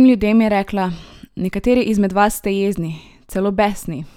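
Listening to this short speech recording, nothing technical stood out.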